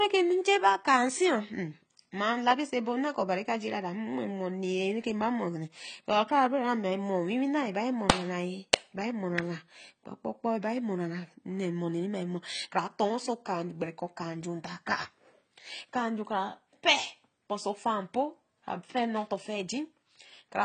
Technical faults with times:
0.00-20.64 AAC compression

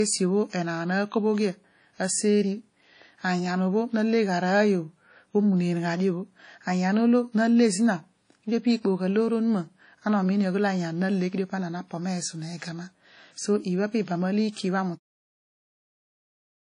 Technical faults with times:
0.00-16.71 WMA compression

